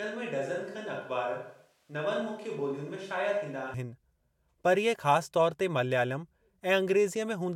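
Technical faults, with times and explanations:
0.00–3.74 s, switch to a distant microphone: the close microphone's feed is likely missing here, leaving a pickup further from the talker, already in use when the clip begins. Because that microphone hears more room than direct sound, the speech is hollow and reverberant, thin in the bass, about 5 dB quieter, and carries background noise roughly 35 dB below the speech. At 3.74 s the close, fuller sound returns abruptly.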